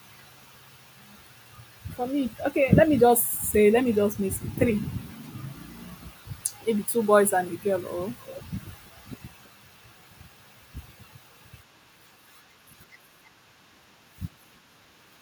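An echo canceller at a far-end loudspeaker likely let some of its microphone pickup through, causing echo leak in this speech clip: a faint copy of the voice, delayed by 325 ms, trails it from 8.17 to 8.9 s and again, barely audible, from 9.43 to 9.5 s.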